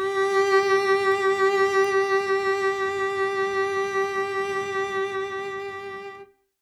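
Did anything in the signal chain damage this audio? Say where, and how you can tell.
Yes. Two bit error spikes hit the music, at 1.12 s and 1.85 s. Each is one sharp broadband tick, about -24 dBFS then about -18 dBFS, unrelated to the playing. A flipped bit in storage or a digital link knocked one sample off by a power of two.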